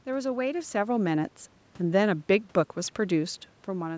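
Nothing technically wrong stood out on listening to this speech recording.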